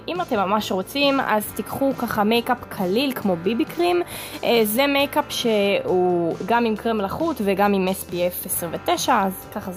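Nothing goes wrong anywhere in this audio, so there's nothing to point to at any moment along the way.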